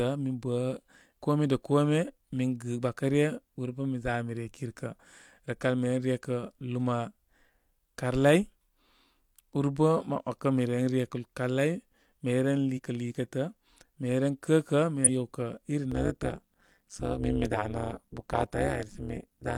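A speech recording with two kinds of fault. Damaged data in a compressed stream shows up three times: a single blip at 1.17 s, just before "kome da", then short glitches from 12.74 to 12.79 s and from 15.04 to 15.09 s. At each point part of the coded stream is corrupt, so the decoder misreads or discards those frames, loses sync, and has to hunt for the next valid frame header. That produces a brief glitch. From 15.92 s to the end there is overlap-add ripple. The audio has been split into windowed frames and rejoined with an overlap that does not add up to a constant gain, so the level swings once per frame. Here the swing is deep, about 60 dB, and it repeats at around 200 Hz, which gives the speech a harsh, metallic buzz with extra tones around it rather than a fast flutter.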